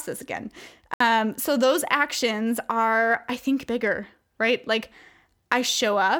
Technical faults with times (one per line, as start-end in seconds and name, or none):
0.94-1.01 Bluetooth stall